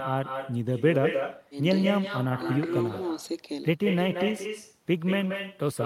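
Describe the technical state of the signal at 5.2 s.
At 5.2 s the speech carries echo with no canceller, present throughout. A far-end loudspeaker feeds the mic, returning a thinner copy about 7 dB down, roughly a fifth of a second late.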